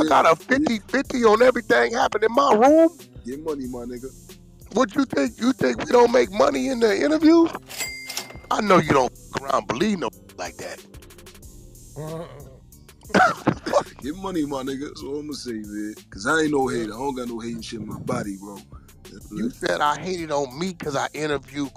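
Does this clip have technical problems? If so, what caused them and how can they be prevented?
No, nothing stood out as a technical problem on listening to this clip.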